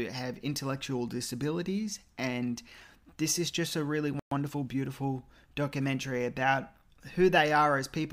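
At 4.19 s the speech cuts off mid-flow and the output stays silent for 120 ms, until 4.31 s. This is a playback stall, likely the player running short of data or its thread being blocked. The waveform drops to a flat line, and the spectrogram shows a clean vertical gap across all frequencies.

From 4.31 s to 4.79 s the player recovers with time-compressed catch-up, trimming its backlog by splicing out short pieces and cross-fading the joins. Speech runs about 1.25 times faster at unchanged pitch. Harmonics stay level while syllable patterns look squeezed together.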